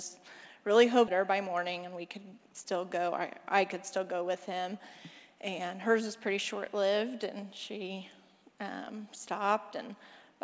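At 1.08 to 1.10 s the audio skips ahead: about a second of sound is simply missing, and playback joins the material on either side of the jump almost directly, with no silence or filler. Unlike a dropout or concealment gap, nothing stands in for the lost stretch. The timeline just lurches forward, which fits a jitter buffer that overflowed and discarded queued audio, shrinking the playout delay by roughly a second in one step.

From 1.18 to 2.65 s a jitter buffer speed-up follows. The receiver still holds more audio than it wants and trims it by repeatedly cutting out short pieces one or a few pitch periods long, taking out somewhere around 150 ms in total. The sound runs about 8% fast while its pitch stays put, giving a hurried cadence. That unchanged pitch separates it from a sample-rate mismatch, which would raise pitch along with speed. It also differs from the skip before it, where a whole block vanished in one jump. 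The G.722 call path, with nothing above 8 kHz, carries the audio throughout.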